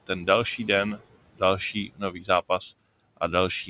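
From 1.73 to 2.29 s the speech goes faint and swallowed, dropping by about 18 dB. This is speech cut by the noise suppressor, which mistook it for background noise.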